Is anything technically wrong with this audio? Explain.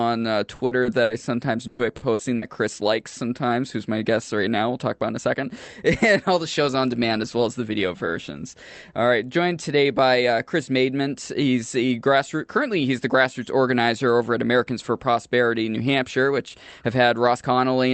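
Yes. There are three kinds of network playout fault in this speech.

From 0.55 to 1.13 s, and again from 1.67 to 2.45 s, the speech turns choppy, with bits of sound dropping out. This is repeated packet loss. Each burst has four gaps, the longest 70 ms in the first and 120 ms in the second. The receiver patched each gap by extending the previous sound, which covers roughly a third of each stretch. Some of the audio still went missing outright, about 120 ms and 240 ms respectively.

Between 3.08 and 3.19 s, one sound is held a touch too long, with a faint buzzy smear before the speech picks up where it left off. This is a short stall from a late packet. The packet arrived about 30 ms behind schedule, so the jitter buffer ran dry and the last sound was stretched over the wait. Nothing is lost, and the timeline ends up only about 6 ms longer.

From 5.13 to 5.69 s, the speech sounds hurried, running at about 115% speed while the pitch stays put. 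This is a jitter buffer speed-up. The buffer had built up more audio than it wanted, so it trimmed many tiny pitch-period slices in quick succession, removing about a tenth of a second in total to bring the delay back down.

All of this rides on the call codec, which here limits the audio to about 8 kHz at a rate consistent with 32 kbps Opus.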